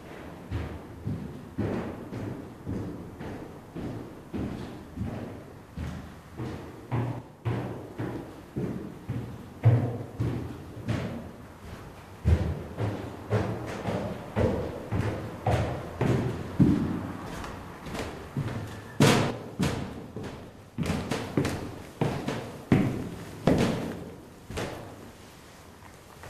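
At 7.19 to 7.45 s and again from 19.31 to 20.89 s the sound abruptly drops by about 6 dB and then snaps back. That's most likely one channel dropping out: with one side gone, the mono sum keeps only half the shared content, and anything carried only on the lost side vanishes.

At 15.77 s and 22.11 to 22.13 s there are short blips, which points to damaged data in the compressed stream. The decoder hits bad bytes, misreads or rejects those frames, loses sync and hunts for the next frame header.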